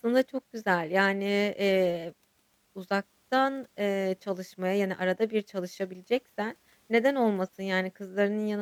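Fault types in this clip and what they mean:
No technical faults detected.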